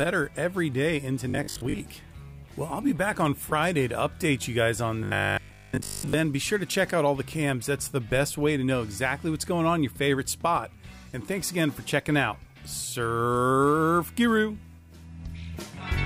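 Audio was likely arriving too slowly for playback, so the software kept repeating its last short buffer, about 20 ms, while real audio went missing. This gives robotic sound from repeated short buffers: a rigid 50 Hz metallic buzz that still loosely tracks the sound. It first occurs from 1.30 to 1.80 s, with about half the material repeated, then again from 5.04 to 6.14 s, where most of it is repeated.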